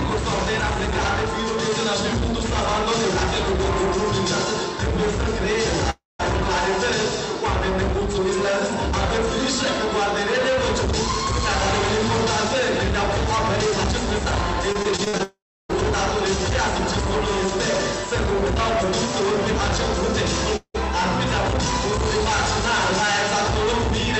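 From 5.90 to 6.21 s, a long network dropout likely cut the stream for about 0.3 s: the last sound is stretched into a fading buzz, then about 0.18 s of silence before the audio resumes with that part lost. Between 14.72 and 15.74 s, repeated packet loss opens eight short holes, none longer than 50 ms, each patched by continuing the previous sound, so this stretch turns choppy and robotic. Inside it, from 15.23 to 15.71 s, a longer dropout likely leaves about 0.46 s missing, a brief fading fill and then about 0.31 s of silence. At 20.56 to 20.76 s, a shorter dropout likely removes about 0.18 s, with a quick fading tail and about 70 ms of silence. All of this comes through a call codec path limited to an 8 kHz bandwidth.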